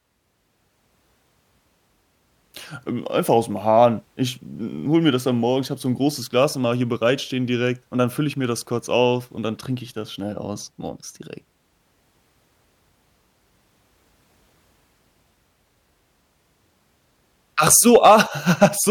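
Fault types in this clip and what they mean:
Hard clipping: from 17.67 to 18.21 s, and again briefly at 18.63 to 18.65 s, the speech drives a stage about 4 dB past what it can carry, so the waveform peaks are sheared flat. Those squared tops add harmonics high above the voice's own spectrum, heard as a gritty crackle riding the louder syllables through the longer stretch, then as a short crackle in the second, brief burst.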